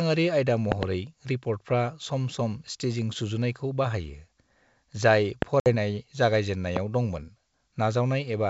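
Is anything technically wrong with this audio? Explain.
Yes, there are two kinds of fault. A loud pop occurs as a pair at 0.72 to 0.85 s, then singly at 5.42 to 5.44 s and 6.77 to 6.79 s, peaking about 20, 20 and 15 dB above the speech. Each is likely a voltage pulse from a plug, switch or static, and is heard as a sharp thump over continuing speech. Packet loss on an ADPCM call leaves a hard-edged 60 ms silence at 5.60 to 5.70 s, which fits about three lost packets. The decoder's predictor and step size drift from the sender's, so speech resumes slightly distorted before settling.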